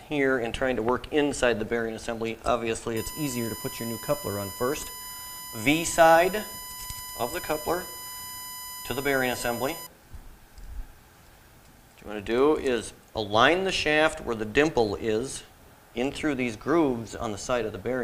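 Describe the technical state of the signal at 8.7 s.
At 8.7 s a USB whine is present, running from about 2.97 s to 9.87 s. Current drawn in 1 ms bus frames leaks through power or ground, giving a fixed 1 kHz tone whose strongest harmonic sits at 13 kHz, roughly 15 dB below the signal.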